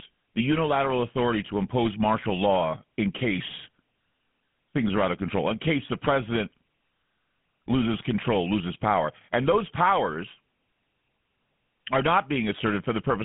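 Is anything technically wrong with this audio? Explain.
Yes. Throughout the speech runs through a GSM full-rate codec, and the damage is plainly audible. The codec models the vocal tract as a filter excited by a sparse, regularly spaced pulse train, so the fine detail of the excitation is lost and rebuilt coarsely. The result is a buzzy, gravelly roughness on the voice, which fits a 13 kbps GSM full-rate coder. The band is confined to about 150 Hz to 3.4 kHz, giving a thin, telephone-like sound.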